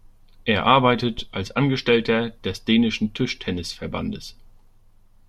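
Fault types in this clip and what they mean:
Phantom power thump: a supply switched on or off on a live input sends a step through the coupling capacitors, giving a deep thump near 1.2 s, peaking around -22 dBFS and dying away within about 30 ms.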